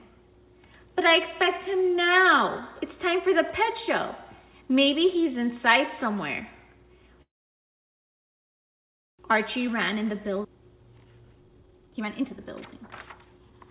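At 7.22 s the audio stalls, and what you hear is a call audio freeze. The last bit of sound gets stretched into a very short fading buzz, then it's essentially dead quiet for about 1.9 s, until things pick up again at 9.21 s. The likely cause is packets held up in transit, which ran the jitter buffer dry. When they show up, playback resumes exactly where it left off. Nothing's lost, but the whole stream now sits about 2 s later than before.

From 9.61 s right through to 13.67 s you get the jitter buffer speed-up. The buffer is now holding way more audio than it wants after that stall, so the receiver keeps snipping out tiny pitch-period-sized slices to shrink the backlog. Playback runs at about 127% speed with the pitch left alone, so it comes across as noticeably rushed rather than chipmunky. Over those four seconds it claws back roughly a second of delay.

In the middle of that, at 10.43 to 10.46 s, there's a skip ahead. 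Something like 0.7 s of audio simply drops out and the two sides get spliced together with almost no gap, so you hear a sudden lurch forward instead of a pause. Between that jump and the speed-up, most of the extra latency from the freeze gets clawed back.

Underneath all of it you can hear the call path's band limit. Nothing comes through above 4 kHz, which fits G.711 A-law at 64 kbps.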